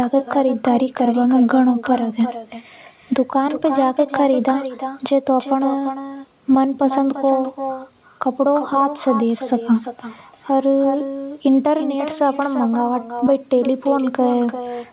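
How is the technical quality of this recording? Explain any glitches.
The main problem is an echo that runs through the whole recording. Every phrase is followed by a fainter and thinner copy of itself, trailing roughly a third of a second behind and sitting about 10 dB below the speech. This is echo with no canceller. The far end was playing the call through a loudspeaker, and its microphone picked that sound up again. Nothing in the chain subtracted it, so the speech travelled the network and came back delayed. Throughout, the speech is confined below 4 kHz, which fits a narrowband telephone codec such as G.711.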